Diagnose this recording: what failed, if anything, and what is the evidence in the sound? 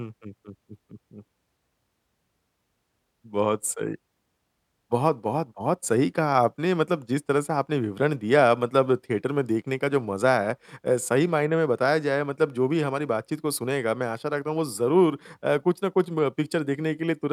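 Nothing failed in this recording, and the sound shows no evidence of a fault at any stage.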